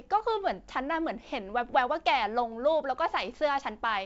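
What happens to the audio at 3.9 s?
Nothing goes wrong at 3.9 s; the speech carries on intact through that moment, with the G.722 wideband telephone coding at 64 kbit/s leaving at most a faint upper-band hiss.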